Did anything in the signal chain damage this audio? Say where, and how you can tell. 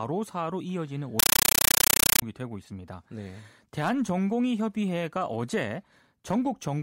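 Yes. At the playback stage, from 1.19 to 2.22 s, a compressed stream was played as audio: Dolby Digital data went out as raw samples instead of being decoded. The speech becomes loud, chattering static, with roughly 9 ms noise bursts repeating 31 times a second. That pattern points to an AC-3 stream.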